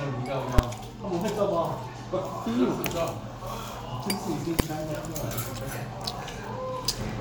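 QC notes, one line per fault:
0.59 s and 4.60 s, invalid numbers at full scale: each point is a single hard bang far louder than the surrounding audio. A calculation returned infinite or invalid values, which were forced to the largest positive or negative value. The output was pinned at one extreme value for one processing block, about 5.8 ms at 0.59 s, which fits a 256-sample buffer, and about 1.45 ms at 4.60 s, which fits a 64-sample buffer. Both blocks are too short to hear as separate start and end pops, so each lands as one sharp bang.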